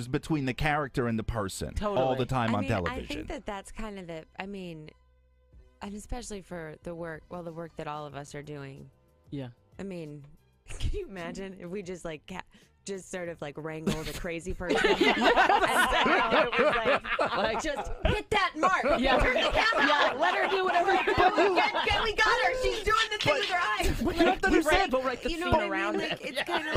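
At 19.09 s the call's bandwidth estimate fell and the encoder's bitrate was cut from 96 kbps to 16 kbps, staying at its lowest for about 4.9 s. Coding turns coarser and the high frequencies are cut, so the sound grows rough, watery or muffled until the bitrate recovers at 26.57 s.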